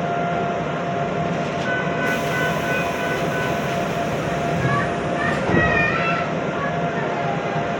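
A recording of everyday sounds, with nothing technically wrong with it.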